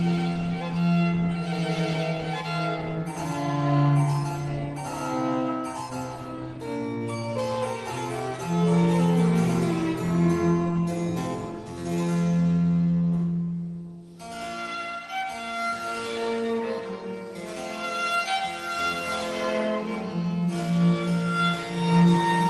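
Nothing is technically wrong with this audio, which comes through an Opus call path that is working as intended.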